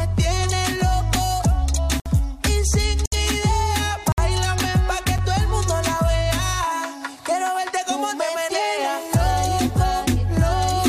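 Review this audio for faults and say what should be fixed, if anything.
Gaps between stream segments appear at 2.00–2.06, 3.06–3.12, 4.12–4.18 and 5.18 s. Segment timestamps leave small holes at roughly one-second boundaries that play as silence, flat lines on the waveform and vertical blank stripes on the spectrogram. Align segment timestamps so each begins where the previous ends.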